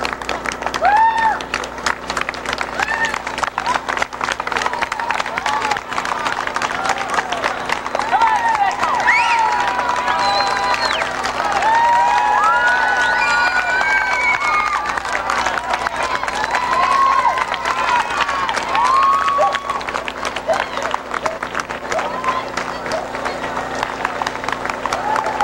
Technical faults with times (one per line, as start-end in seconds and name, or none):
none